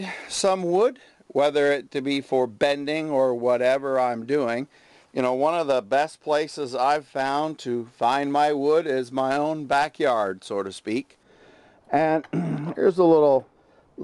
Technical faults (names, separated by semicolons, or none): de-emphasis applied wrongly